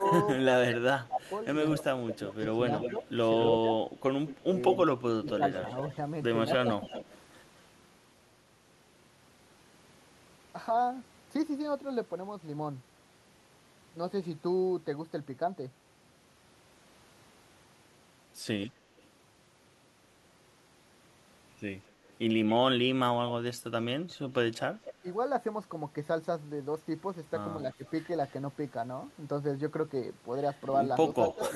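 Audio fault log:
0.00–5.41 s, 6.64–6.93 s and 24.17–25.05 s: speech suppressed in double talk. The level ducks by up to about 20 dB in the first stretch (around a second and a half affected in all), about 10 dB in the second, and about 15 dB for a few hundredths of a second in the third. The likely cause is an echo canceller that could not separate the local talker from loudspeaker echo while both sides spoke, so it attenuated everything.
0.04–7.18 s, 18.66–19.03 s, 22.08–24.94 s, 27.87–28.33 s and 30.66–31.52 s: echo leak. A delayed copy of the speech trails it by 225 to 238 ms, drifting slightly later across the clip. Its level ranges from faint, about 35 dB down at 18.66 s and 27.87 s, to prominent, about 10 dB and 5 dB down at the start and end. This points likely to a far-end loudspeaker whose canceller left residual echo that was sent back.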